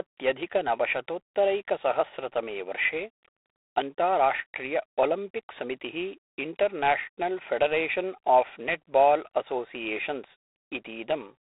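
Speech heard throughout with G.726 ADPCM damage: a harsh, rasping hiss that rises and falls with the speech level, unlike steady noise, fitting 24 kbit/s, and nothing above 3.8 kHz.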